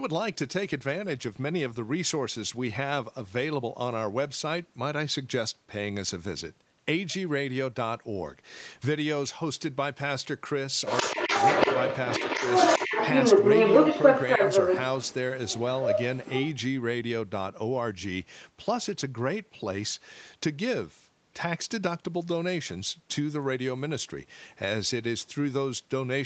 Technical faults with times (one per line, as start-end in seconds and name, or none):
10.86-15.15 other side's voice leaking through
11.03-11.34 speech suppressed in double talk
15.46-16.51 other side's voice leaking through